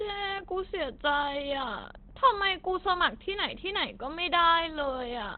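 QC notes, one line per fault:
throughout Opus compression: likely a narrowband speech-mode encoder, consistent with 16 kbps; nothing above 4.4 kHz survives, so speech sounds plainly muffled and hoarse.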